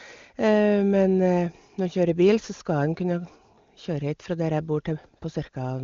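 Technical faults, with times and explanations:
No technical faults can be heard in this speech, which passes through an AMR wideband (HD Voice) path.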